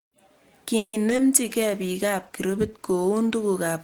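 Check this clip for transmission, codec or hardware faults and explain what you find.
Three kinds of network trouble show up in this speech clip: a freeze, some brief concealed packet loss, and a bitrate drop that lasts to the end.

Call audio freeze, 0.77 to 0.95 s: the last sound is stretched into a fading buzz for about 160 ms, with roughly 50 ms of near-silence, then speech resumes where it left off. That's likely late packets draining the jitter buffer, so the call falls about 160 ms behind but nothing is lost.

Short concealed packet loss, 1.09 to 1.21 s, with a second hole at 1.16 to 1.20 s: around 20 ms of audio never arrived each time, and the decoder papered over it by extending the previous sound. You hear a quick smear or wobble rather than a gap.

Call bitrate drop, 1.43 s to the end: the sound turns rough and watery, which points to the encoder being throttled from around 64 kbps down to about 14 kbps after the bandwidth estimate fell. 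It sits at the lowest rate for about 1.5 s and doesn't recover before the clip ends.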